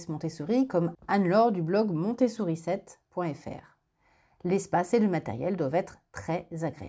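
Speech recording, with no technical faults to report.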